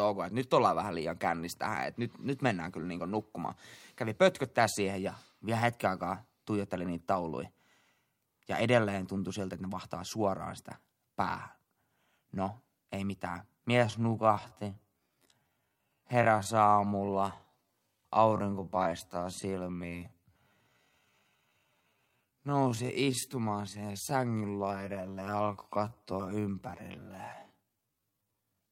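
A speech clip with one time-stretched section. From 13.73 s, right after "ei mitään", to the end, the pace drops abruptly to about 0.59 times normal speed while the pitch holds. The slowed audio drags, likely from software repeating short pieces to lengthen it.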